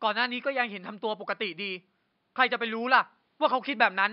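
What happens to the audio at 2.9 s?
Nothing goes wrong at 2.9 s: the speech continues intact, with only the room's faint background noise sitting about 50 dB below it.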